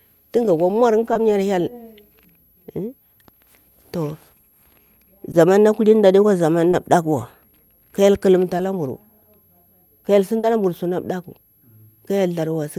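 A faint high whistle sits under the whole recording, drifting between 11.6 and 11.7 kHz about 40 dB below the speech: a switching supply whistle from a power supply running in audible burst mode or beating with another one.

Brief smears appear at 1.13, 5.31 (just before "na kulini"), 6.71, 8.57 and 10.39 s (just before "la mburu suna ɗakku"). Each is a short concealed packet loss, where missing audio was filled by extending the preceding sound, 20 ms each time and 40 ms at the last.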